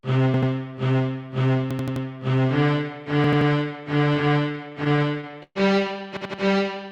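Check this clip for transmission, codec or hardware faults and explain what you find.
Two kinds of fault are present: repeated buffers and a stretch of repeated stalls.

Repeated buffer, at 0.34 to 0.51 s, 1.71 to 2.05 s, 3.24 to 3.50 s and 6.17 to 6.42 s: an 85 ms chunk stutters, hard-joined, two to four extra times. Fresh audio arrived late, so the device replayed its last buffer, which fits a 4096-sample buffer.

Repeated stalls (stutter), from 4.29 to 5.57 s: the sound drags and hiccups repeatedly, gaps up to 123 ms filled by continuing the last sound. Late packets kept draining the jitter buffer. Nothing is lost.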